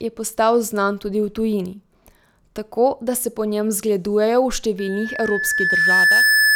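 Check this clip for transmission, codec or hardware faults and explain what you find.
There is one hardware fault, a loudspeaker feedback squeal from 4.78 s to the end of the clip. The microphone is picking up its own loudspeaker, and at 1.7 kHz the loop gain exceeds one, so that tone feeds itself, swelling over about a second and a half into a squeal roughly 5 dB louder than the speech.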